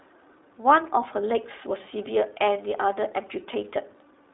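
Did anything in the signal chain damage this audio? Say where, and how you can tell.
Yes, at the codec: iLBC coded each 20 ms frame independently. Throughout, nothing passes above 3.9 kHz, and the speech sounds plainly rough and synthetic.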